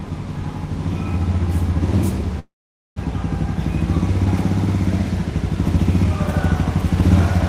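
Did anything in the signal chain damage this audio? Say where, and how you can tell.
Yes, at the network stage. From 2.39 to 3.00 s the sound fades into a buzz and then silence. This is likely a long network dropout that lost 0.4 s.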